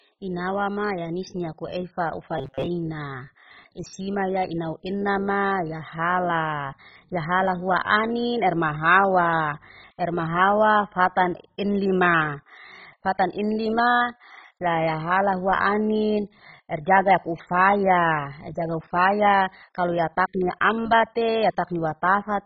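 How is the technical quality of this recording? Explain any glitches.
The recording is speech with heavy compression damage throughout and one short glitch.

MP2 compression is the likely cause of the damage across the whole clip, at a very low bitrate of around 16 kbps. Starved of bits, the encoder has switched off its upper sub-bands and coarsely quantised the rest, leaving the speech dull, gurgling and granular.

Robotic sound from repeated short buffers occurs from 2.38 to 2.68 s, just after "ya anis ni akueifa". Fresh audio likely arrived too slowly, so a short buffer was replayed for most of that stretch. The repetition imposes a rigid metallic buzz at 134 Hz, which points to a buffer of about 7.5 ms.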